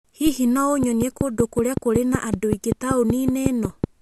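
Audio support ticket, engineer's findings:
Train of clicks over the speech, 0.83 to 3.85 s. About fifteen evenly spaced ticks at 5.3 per second, roughly 15 dB up. Likely nearby interference or a flaky interface.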